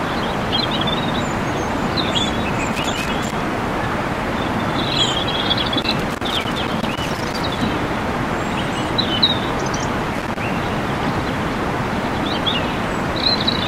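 Loose connector crackle bursts in at 2.73 to 3.33 s, 5.82 to 7.62 s and 10.14 to 10.40 s, as a worn contact makes and breaks and chops the sound into irregular scratching. The waveform shows ragged dropouts and spiky pops, and the spectrogram shows scattered broadband vertical streaks.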